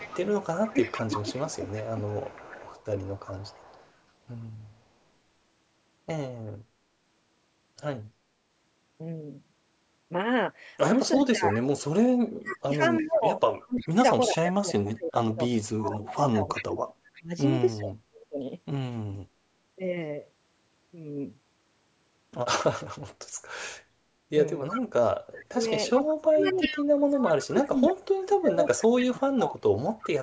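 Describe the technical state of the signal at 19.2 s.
At 19.2 s the speech is intact, with no dropout, distortion or other fault, only the expected band limit of the call microphone processing, which leaves nothing above 8 kHz.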